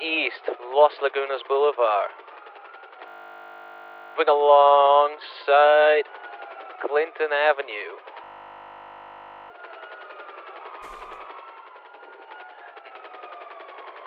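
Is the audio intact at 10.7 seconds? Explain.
Yes, the audio is intact at 10.7 seconds, with no dropout, click, distortion or other fault at that moment.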